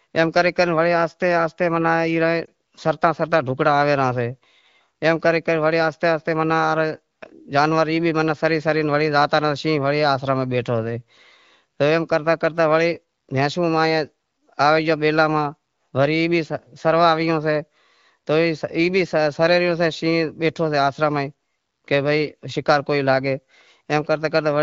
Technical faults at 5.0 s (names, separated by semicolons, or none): none